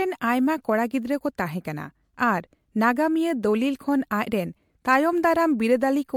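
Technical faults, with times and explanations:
Throughout, generation loss: swirly, hollow, smeared sound with blurred attacks, likely from about four MP3 passes, fitting roughly 96 kbit/s, each re-quantising on a shifted grid.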